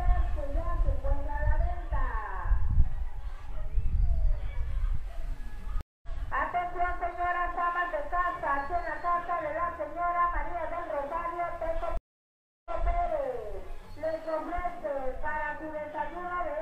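At 5.81 s the connection drops and the player reconnects, starting a fresh decoder mid-stream. This stream reconnect leaves a 221 ms silence, and the audio resumes roughly 150 ms further on, so a short stretch is skipped. A second reconnect at 11.97 s to 12.84 s brings a longer 680 ms gap, after which the server resends earlier material and playback resumes 186 ms back, repeating that moment.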